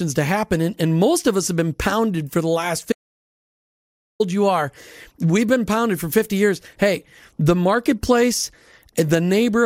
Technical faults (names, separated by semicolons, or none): audio dropout to silence